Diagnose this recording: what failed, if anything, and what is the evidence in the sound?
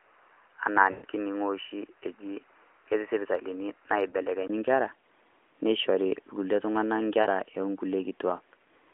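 Input stage, device or driver level. From the start to 4.50 s the speech is dull and boxy. Nothing passes above 3 kHz. The level sits about 5 dB lower, and there is a noise floor roughly 40 dB below the speech. At 4.50 s there is a 20 ms silence, then the band opens up to the line's normal 3.6 kHz ceiling. The likely cause is an input switched to a poorer device, such as a headset call profile, with the system changing back to the better microphone at that point.

Network and radio link, heard through the codec's concealment. These are lost AMR speech frames. From 0.92 to 1.06 s, 120 ms of sound is smeared and drawn out, then fades. That fits a run of about six 20 ms frames. At 4.10 s a single 20 ms dip occurs. From 7.22 to 7.27 s, 40 ms of sound is briefly drawn out. In each case the decoder repeats its last good settings at falling gain until good frames arrive.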